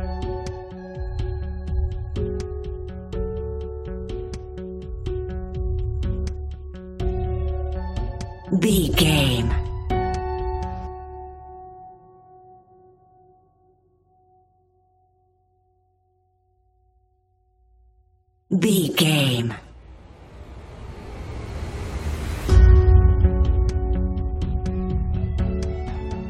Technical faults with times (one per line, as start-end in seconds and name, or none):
none